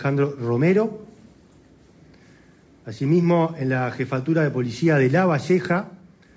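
No technical faults can be heard anywhere.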